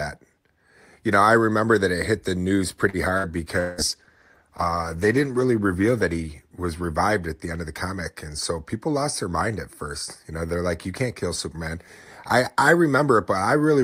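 At 2.89 s a short stall from a late packet holds the sound for about 41 ms until 2.97 s. The jitter buffer ran dry, so the receiver stretched the last fragment and then resumed at the same point. Nothing is lost, but playback now runs 41 ms later.

A burst of packet loss follows at 3.18 to 3.27 s. About 60 ms of consecutive audio never arrived in time. Concealment carries the previous sound forward and fades it, so a brief buzzy or hissy smear replaces the missing stretch before the audio picks up further on.

From 3.56 s to 7.02 s a call bitrate drop coarsens the coding as the encoder falls from 48 to 16 kbps, staying at the lowest rate for about 1.1 s. At that rate Opus discards the upper band, so the sound turns muffled and watery until the rate recovers.

Inside that stretch, from 3.60 to 3.81 s, about 180 ms of audio is replaced by a concealed buzz or hiss that decays without reaching silence. 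When the signal returns, that portion is gone. This is likely a long network dropout, where no packets reached the receiver for the whole interval.

From 8.73 to 9.34 s a jitter buffer speed-up drains excess buffered audio. The receiver removes short pitch-period slices repeatedly, roughly 50 ms in total, so playback runs at about 106% of normal speed with unchanged pitch and sounds slightly hurried.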